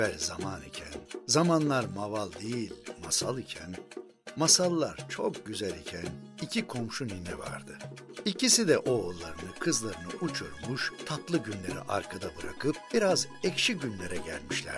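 No technical faults are audible anywhere in the recording.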